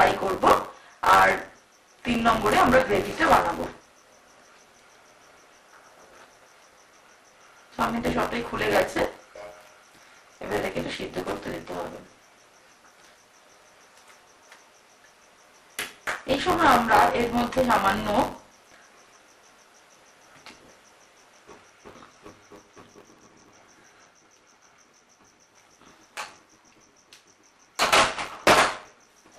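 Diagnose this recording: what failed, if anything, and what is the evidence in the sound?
Buffer tearing at the driver or buffer stage runs through the whole recording: a steady robotic rattle at about 94 Hz rides on the sound wherever there is signal and drops away in the gaps. That rate fits a 512-sample buffer. The writing program and the hardware reading the ring buffer have slipped, so roughly a fifth of each period replays audio from about 20 ms earlier, with hard joins on both sides every period.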